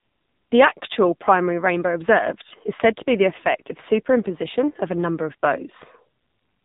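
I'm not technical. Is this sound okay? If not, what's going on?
No. AMR narrowband mobile codec, throughout: the speech went through a cramped phone codec, losing everything above 4 kHz and sounding heavily buzzy and synthetic.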